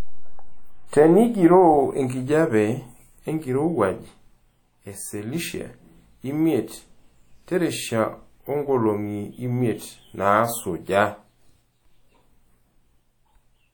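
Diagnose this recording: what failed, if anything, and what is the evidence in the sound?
Codec stage: ringing, washy smearing and breathing hiss throughout, likely WMA compression near 48 kbps; long transform blocks smear noise, so spectrograms show blurred onsets and holes where weak components vanish.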